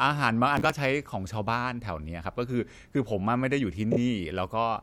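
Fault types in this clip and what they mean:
Processor overload crackle: The system could not finish its small audio buffers on time, so some were skipped and left brief gaps with hard edges. Here it lasts from 0.55 to 0.75 s in the speech. It is heard as a gritty burst of crackle riding on the voice. The spacing fits buffers of around 10 ms, with roughly fifteen missed. The crackle stops once the load eases.
Repeated frames: A short piece of compressed audio was played more than once. The decoder heard the same data again and repeated it. Here it happens from 3.91 to 3.97 s. A 26.1 ms block sounds three times in a row, which points to a single frame played twice extra. The result is a quick stutter. The speech gets 52.2 ms longer.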